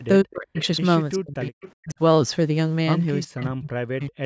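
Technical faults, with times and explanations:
Throughout, low bit depth without dither: the speech has a fine grainy roughness that moves with it, getting grittier as syllables fade and sputtering in the quietest tails rather than settling into a smooth noise floor. That error tracks the signal itself and sits roughly 40 dB below the speech, which fits about 9 bits with the samples likely truncated and no dither to decorrelate the rounding.
0.23–0.58 s, 1.16–1.61 s, 1.8–2.0 s and 3.27 s to the end, speech suppressed in double talk: in each stretch the talker dips hard, at worst by something like 40 dB, with the last run lasting about a second. This is likely the echo canceller hearing both sides at once, failing to separate the near talker from the loudspeaker echo, and clamping everything down.
0.58–0.65 s and 1.42–1.71 s, echo leak: a faint delayed copy of the speech slips through, about 20 dB under the main voice and trailing it by roughly 0.38 s (382 and 384 ms). 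The first is a brief scrap and the second is a longer smear. It's likely the far end running on a loudspeaker with its canceller not fully scrubbing what its mic picked up, so that residue gets sent back.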